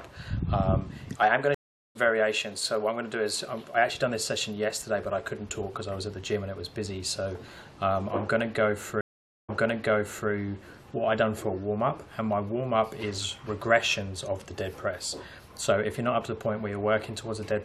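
The audio has two stream reconnect dropouts: at 1.54 s a 406 ms silence resumes about 0.3 s further on, and at 9.01 s a 476 ms gap restarts 813 ms earlier, repeating material as the server re-sent buffered data.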